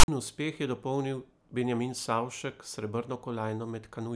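File tags played as audio open this speech clip, from 0.0 to 0.08 s: a block of text metadata is decoded as samples, giving a harsh, lopsided rasp with abrupt edges, and its zero padding then reads as a short stretch of silence before the speech begins.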